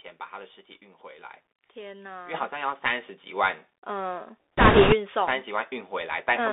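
A speech recording carried over a Bluetooth headset link, with the Bluetooth CVSD headset codec audible from start to finish. The coder sends a single up-or-down bit per sample and adapts its step, and the sound fits a 64 kbps CVSD stream. The line band runs from about 250 Hz to 3.7 kHz. Sibilants come out scratchy, loud bright passages smear where the step can't keep up, and a fine granular hiss sits under everything. On a spectrogram, energy stops hard near 3.7 kHz and thins out below 250 Hz, with a grainy noise floor across the band. At 2.34 s the microphone volume steps up by 8 dB, and at 3.36 s it steps up again by 3 dB. Each time, the call software raised the device's input gain in a single move, so the voice and the background noise jump together. On the waveform, the envelope shifts abruptly to a higher plateau at each point, and the spectrogram brightens uniformly across the whole band. 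From 4.58 to 4.96 s, bit errors on the Bluetooth voice link add a rushing, crackly texture. Roughly one bit in ten is flipped. Because every CVSD bit carries the same small step and the damage decays, there are no sharp clicks, only a broadband wash. It shows as a smeared noise band filling the spectrogram across those 0.38 s, and as fuzz riding on the waveform.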